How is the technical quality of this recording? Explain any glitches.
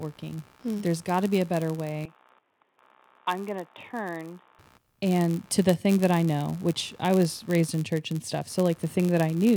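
The technical quality is compromised by three faults: two run through the whole speech recording, and one affects a stretch near the start.

Computer activity noise sits under everything as a faint buzzing, chirping texture, pulsing at around 70 Hz and roughly 35 dB below the speech. Its rhythm follows whatever the computer was doing, not the talking. Shifting processor, graphics or mouse load pulls on a ground shared with the audio circuitry, and those current swings leak into the signal as this irregular scratchy buzz.

A block size mismatch (padded) adds a steady buzz at 99.6 Hz for the full length. The speech also runs at 0.996 times normal speed, about 0.4 percent slow, while its pitch stays essentially unchanged. One processing stage hands over blocks shorter than the next stage expects, and the shortfall in every block is filled with zeros. These tiny gaps repeat at the block rate, which creates the buzz and stretches the timing.

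From 2.05 s to 4.59 s the speech suddenly turns dull and boxy and drops roughly 10 dB in level. There is no gap at either transition. The band narrows, and a different background noise floor appears, roughly 40 dB under the speech. This is likely an input switched to a poorer device, such as a second microphone or a headset running its narrowband call profile, before the recording returns to the original input.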